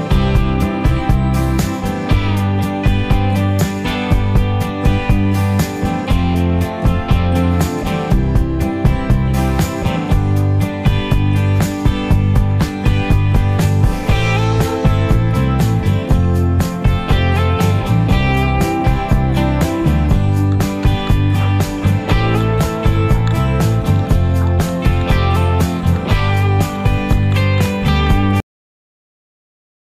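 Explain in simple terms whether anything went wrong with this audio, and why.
At 28.4 s the sound stops mid-stream and drops to dead silence. This is a cut-off end: the final stretch was never written, so nothing fades away naturally.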